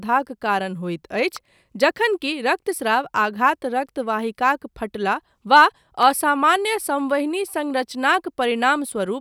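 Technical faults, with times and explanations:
1.36 s and 6.03 s: electrical switching spike. A single sharp snap lands on top of the speech each time, after "कारण होइत" and after "फटला वा". Each lasts about a millisecond and peaks near -15 dBFS. A nearby switch or discharge arcing into the audio line is the likely cause.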